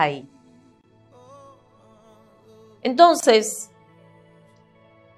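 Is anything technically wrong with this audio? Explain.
Yes. There are two gaps at a join of encoded pieces, at 0.81 to 0.84 s (25 ms) and 3.20 to 3.23 s (27 ms). Separately encoded pieces kept their encoder delay and end padding, opening brief silences whose edges are smeared. Unlike a dropout, the sound then resumes exactly where it stopped, with nothing skipped.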